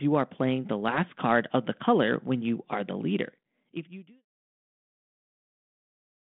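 No technical faults can be heard in the speech. It comes over a 32 kbit/s G.726 telephone path that passes 150 Hz to 3.5 kHz with light codec damage, and the level fades out smoothly from around 3 s to 4.25 s.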